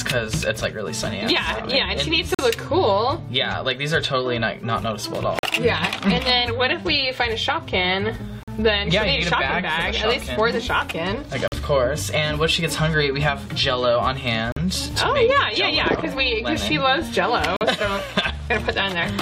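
At 2.35, 5.39, 8.43, 11.48, 14.52 and 17.57 s, a gap between chunks cuts the audio for 44 ms each time. The signal was delivered in 3.0 s chunks, and silence was inserted at every join, so the holes recur at a steady interval of just over 3 s. Nothing is removed; playback simply stops and restarts. Each one sounds like a brief dropout.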